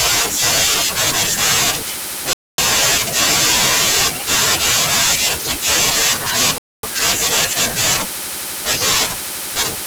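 At 2.33 to 2.58 s and again at 6.58 to 6.83 s, the speech stops for 250 ms: a gap between chunks, where silence sits at each join of 4-second blocks. Nothing is lost, just delayed. The waveform drops to a flat line; the spectrogram shows blank, hard-edged vertical bands.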